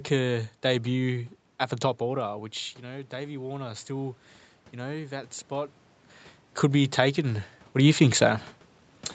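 From 2.15 to 5.82 s, after "debut at the top", automatic gain rising occurs. The input drops about 13 dB, so the gain climbs about 5 dB slowly, swelling voice and room noise together.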